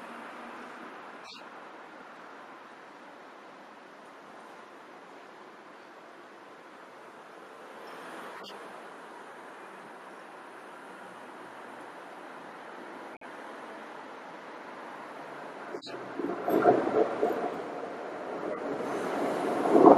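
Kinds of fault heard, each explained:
Corrupt frame decoded: damaged frames were played anyway, giving brief, fairly quiet glitches of misplaced energy near 1.24, 8.34, 15.77 and 18.52 s.
Corrupt frame muted: the decoder rejected damaged frames and silence replaced them, an abrupt 0.12 s hole at 13.13 s, roughly two frames long.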